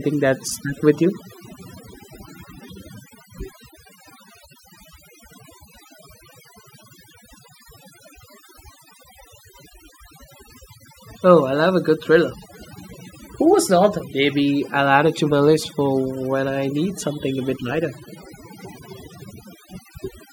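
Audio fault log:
Throughout, overdone noise removal: noise reduction set too hard gates individual frequency bands near the noise estimate, taking quiet voice detail with them, so the voice sits over near-silent, twinkling gaps; a spectrogram shows a blank floor scattered with isolated specks.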